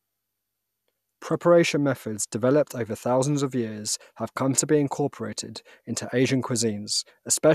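No technical faults can be heard anywhere in the speech recording; the signal stays continuous and steady throughout.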